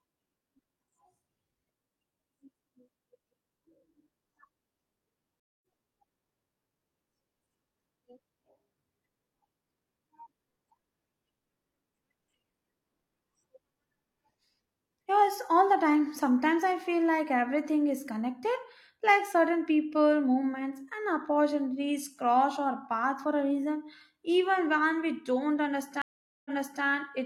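Stream reconnects at 5.40 s and 26.02 s: the connection dropped and a fresh decoder restarted mid-stream. The first leaves a 224 ms gap and resumes around 150 ms further on, skipping sound. The second falls silent for 438 ms and resumes 384 ms earlier, repeating sound.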